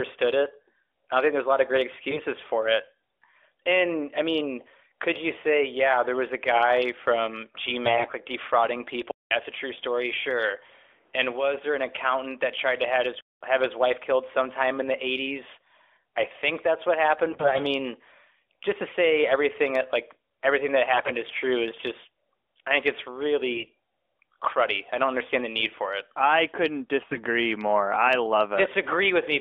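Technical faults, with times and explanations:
2.11–2.21 s, 7.86–8.15 s, 17.28–17.61 s, 20.94–21.11 s, 23.54–23.70 s, 27.08–27.23 s: AMR bit errors. Each burst makes the voice go hoarse, scratchy and a bit gargly for a fraction of a second while pitch and loudness roughly hold. The first lands just after "a lot of great", before "for it", and the fifth follows "just I think it's". The 8 s and 21 s bursts sound roughest, with roughly one bit in seven flipped against about 7 to 10 percent elsewhere. Flipped low-priority bits slip past the frame checksum, so the decoder puts its excitation pulses in the wrong places and gets pitch, gain and spectral detail slightly wrong.
9.11–13.41 s: input switched to a poorer device. Right after "like defrauding" there's a gap of about 200 ms, then the sound comes back duller and boxier, about 5 dB quieter, with nothing above 4.3 kHz and a new noise floor about 35 dB below the voice. 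That shift in bandwidth, tone, level and noise all at once most likely comes from the recording input jumping to a different mic or a headset's call profile. The original sound returns just before "have his wife killed".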